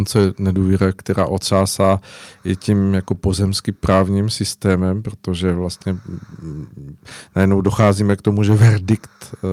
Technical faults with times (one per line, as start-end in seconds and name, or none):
0.00-9.52 clock drift between sender and receiver
0.22-9.19 repeated timing corrections